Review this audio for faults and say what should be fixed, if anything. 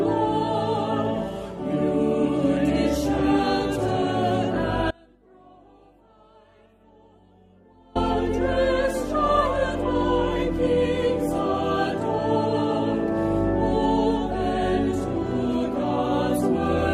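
An audio dropout to a faint residue runs from 4.91 to 7.95 s. The signal cuts abruptly for about 3 s, leaving only a faint leak roughly 30 dB below normal, likely from the wanted feed being lost while the downstream path stayed live. Monitor source connections and link status during capture so a lost feed is caught and re-recorded.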